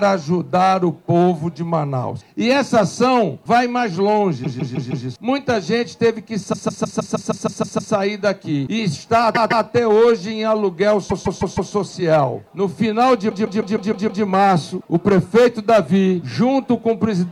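Repeated frames stutter at 4.43–5.06, 6.52–7.93, 9.34–9.65, 11.09–11.72 and 13.29–14.23 s. Each time, the same block of about 0.16 s (consistent with six compressed frames) replays 4, 9, 2, 4 and 6 extra times. Unlike dropouts, nothing is lost; the sound gets longer.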